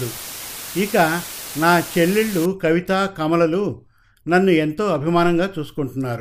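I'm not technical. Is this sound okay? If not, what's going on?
No. Low bit depth with dither runs from the start to about 2.5 seconds. The speech is stored with very little detail, which fits roughly 5 bits, and added random noise hides the rounding, so you hear a loud, steady hiss instead of harsh distortion.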